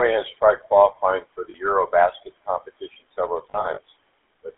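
The GSM full-rate codec is present from start to finish. The sound is modelled as a vocal-tract filter driven by a sparse, regular pulse train, which gives a plainly audible buzzy, gravelly roughness. The audio is confined to about 300 Hz to 3.5 kHz, consistent with a 13 kbps full-rate stream.

Lost GSM frames occur at 1.50 to 1.55 s, right after "has tried qualifying for". The decoder fills the gap by repeating the last good frame's settings. The result is a brief, rough metallic ring of about 40 ms, which fits two missing 20 ms frames.

Lost GSM frames return from 3.50 to 3.79 s, just after "competition several". About 120 ms of frames are missing, scattered across 280 ms in short runs of around 40 ms at most. Each run is patched with a repeat of the preceding frame, producing a stuttering, metallic, ringing texture.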